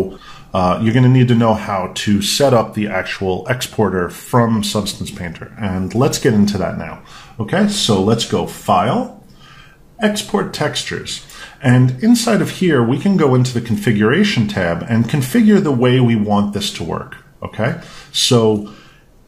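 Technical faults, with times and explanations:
No technical faults detected.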